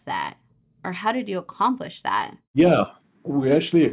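No technical faults can be heard anywhere in this speech recording. There is nothing here to place in time order.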